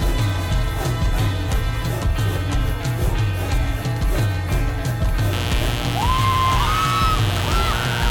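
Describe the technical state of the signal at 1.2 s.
At 1.2 s the music plays through intact, with no dropout, distortion or other fault to be heard.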